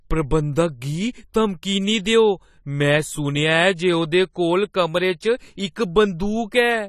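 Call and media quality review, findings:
Dull, smeared speech throughout, fizzy and warbling on sibilants and held vowels; nothing above 14.1 kHz. Likely AAC compression (AAC-LC): frame-by-frame coarse quantisation of frequency lines against a hearing model, upper band dropped. Artefact level fits about 32 kbps.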